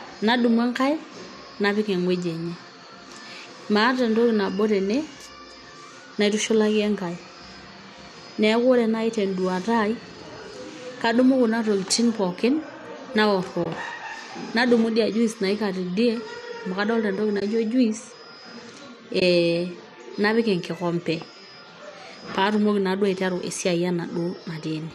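At 13.64, 17.40 and 19.20 s, AAC frame loss with muting leaves brief soft-edged gaps of about 20 ms where zeroed frames fade out and back in.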